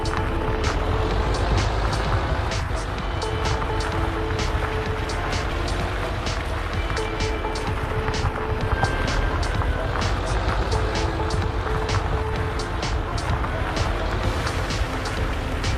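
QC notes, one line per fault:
No faults heard anywhere in the audio.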